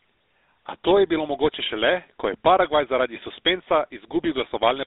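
Speech, carried through a GSM full-rate codec from start to finish. The band sits near 300 Hz to 3.7 kHz. A plainly audible buzzy, gravelly roughness fits 13 kbps pulse-driven coding.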